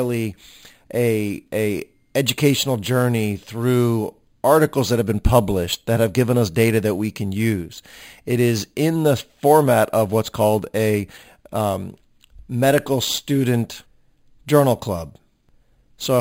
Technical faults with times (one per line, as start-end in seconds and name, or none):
0.00-16.20 imaging from sample-and-hold upsampling